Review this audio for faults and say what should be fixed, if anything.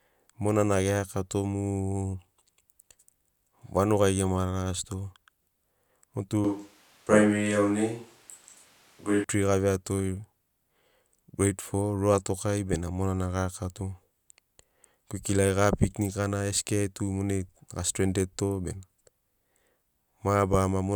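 From 6.4 to 9.2 s the close microphone's feed likely dropped out and the recording fell back on a microphone further away, a switch to a distant microphone. The speech turns suddenly roomy and hollow with thinner bass, while its loudness stays about the same and the background noise remains far below it. Monitoring the close microphone live and recording a backup track of it would prevent this.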